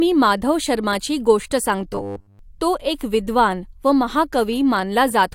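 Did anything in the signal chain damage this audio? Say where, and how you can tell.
Yes, the damage most likely comes from the driver or buffer stage. From 1.93 to 2.39 s the speech collapses into robotic sound from repeated short buffers, a rigid metallic buzz pinned at 100 Hz that still roughly tracks the words. That pitch means a 10 ms chunk is being looped. Fresh audio wasn't arriving in time, so the last buffer got replayed to fill the gap, and roughly 70 percent of that stretch is repeats rather than real signal.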